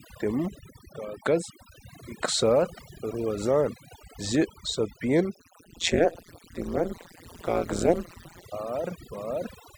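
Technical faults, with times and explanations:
Throughout, overdone noise removal: the noise reduction is cranked so hard that individual frequency bands get pulled right down whenever they sit near the noise estimate. The background collapses into near silence with little twinkling specks, and the quieter parts of the speech go too.
5.35 to 8.44 s, overlap-add ripple: the frames were stitched back together with an overlap that doesn't add up to a steady gain, so the level dips and swells once per frame, by about 60 dB. At a rate of roughly 150 Hz that comes across as a metallic buzz with extra tones around each note.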